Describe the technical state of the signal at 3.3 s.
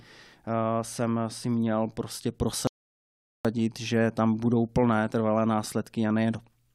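At 3.3 s the signal is silent, inside a rebuffering stall running from 2.67 to 3.45 s. The player ran out of downloaded audio and paused until more arrived. The speech then resumes exactly where it stopped. Nothing is lost. About 0.78 s is added.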